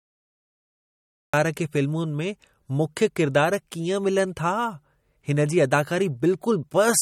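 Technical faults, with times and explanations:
0.00 to 1.34 s, cut-off start: The clip opens in digital silence, and the speech begins abruptly at 1.34 s, already in the middle of a sound, with no natural attack or fade-in. The recording or stream evidently began late, so the first part of that sound was never captured. On a waveform, the trace is flat up to 1.34 s and then jumps straight to the level of the speech. On a spectrogram, a blank black region ends in a sharp vertical edge.
Throughout, MP3 compression: The speech sounds plainly watery and swirly. Sibilants carry a metallic chirp, and consonant onsets are smeared rather than crisp. This is likely MP3 coding at a low bitrate, which fits around 48 kbps. Short of bits, the encoder discards weak frequency components, and they flicker on and off from frame to frame. A spectrogram shows nothing above 18 kHz, with a hard horizontal ceiling, and patchy, blotchy gaps in the upper bands.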